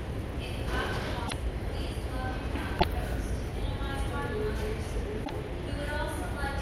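Everyday sound with three brief faults from damaged data in a compressed stream, at 1.24 to 1.34 s, 2.76 to 2.84 s and 5.21 to 5.30 s. Each blip marks corrupted frames the decoder misreads, losing sync until it locates the next valid frame header.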